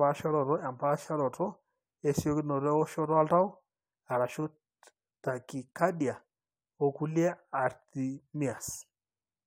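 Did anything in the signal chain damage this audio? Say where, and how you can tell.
No, the speech signal shows no damage from any stage of the chain, with nothing audible that points to a wiring, converter, buffer, format, processing, network, storage or playback fault.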